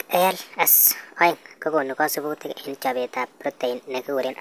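Speech plays too fast and too high from start to finish, a wrong sample rate fault. Everything runs about 1.45 times normal speed, with pitch raised about 6.5 semitones. Speed and pitch shift together. That fits 22 kHz audio played at 32 kHz without conversion.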